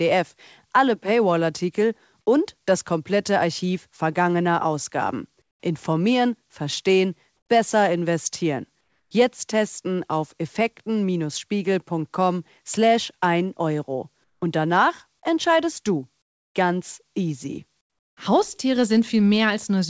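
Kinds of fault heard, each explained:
Comfort noise in place of the background: six pauses between 5.4 and 18.2 s, each 0.12 to 0.36 s long, lose the real background to a flat, featureless hiss, mostly quieter by about 5 to 26 dB. The likely cause is discontinuous transmission, with the receiver synthesising noise to fill each gap.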